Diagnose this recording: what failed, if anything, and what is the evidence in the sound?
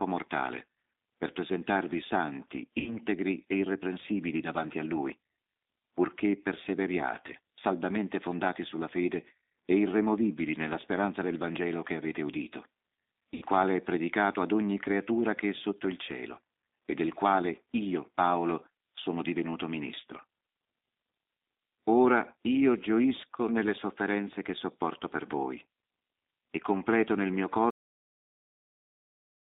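The codec stage is G.729 at 8 kbit/s throughout, passing only about 250 Hz to 3.7 kHz. The speech is rough and synthetic from pulse-coded excitation, not merely band-limited.

In the network stage, VoIP packet loss was concealed by the speech codec. At 2.80–2.97 s, after "mortale per presentarvi santi", and at 13.34–13.45 s, before "quale è predicato ad", the speech is stretched into a buzzy tone or coloured noise that fades. That points to about 60 ms and 80 ms of lost audio, not dropouts to silence.

At the playback or buffer stage there is a cut-off end. After "e completo nel mio" the audio stops mid-sound at 27.70 s and drops straight to digital silence, with no decay or fade.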